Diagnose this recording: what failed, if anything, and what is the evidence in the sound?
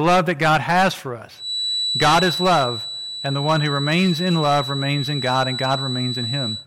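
Hard clipping runs the whole way through. The speech is being pushed about 16 dB past what the converter or a gain stage can pass, so something like one sample in twenty gets its peak sliced flat. That's the harsh fuzz riding on every louder syllable.

There's also a feedback whistle. Right after "has for" at 1.33 s, a thin tone at 3.9 kHz, slowly swelling and fading, appears and holds to the end, about ten decibels under the speech. The likely cause is a speaker-to-mic loop sitting right on the edge of howling.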